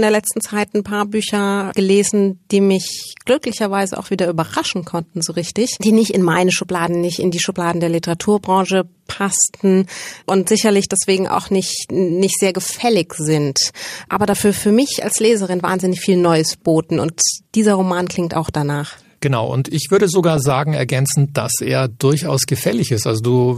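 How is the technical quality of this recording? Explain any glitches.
Two short bursts of DAB burbling break up the speech. From 14.12 to 14.42 s, after "nicht sehr gefällig sind", and from 20.37 to 20.59 s, after "und ich würde sogar", bit errors that slip past error correction corrupt MP2 scale factors and samples. Individual sub-bands jump in level or pick up short blips of noise.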